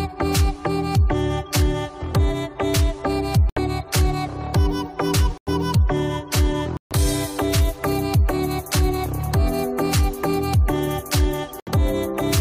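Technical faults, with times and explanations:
3.50–3.59 s, 5.38–5.49 s, 6.77–6.92 s and 11.60–11.69 s, corrupt frame muted: the decoder rejected damaged compressed frames and the player put silence in their place. Each gap starts abruptly and lasts about 90, 110, 150 and 90 ms, which fits three to six dropped frames. Unlike a stall or buffer dropout, the sound resumes exactly on time, with nothing repeated or smeared to cover the hole.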